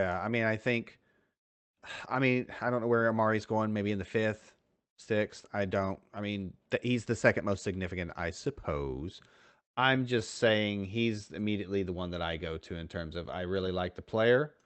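No technical faults occur anywhere in this speech recording, which carries only the normal coding character and upper-frequency limit, around 8 kHz, of the Opus call path it came through.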